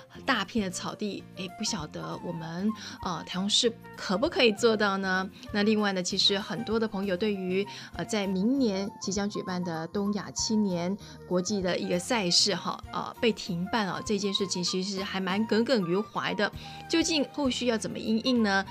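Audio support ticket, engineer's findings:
Channel delay (comb filtering), 8.33–11.68 s. Hollow, phasey colouring with fixed notches, first one around 3 kHz. One channel lags the other by roughly a fifth of a millisecond before the mono sum. Shared content cancels at evenly spaced frequencies.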